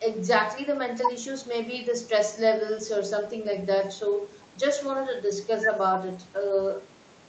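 Speech over a WebRTC call path, with the high end stopping near 8 kHz as fits an Opus wideband setting around 32 kbps, and no technical fault to report.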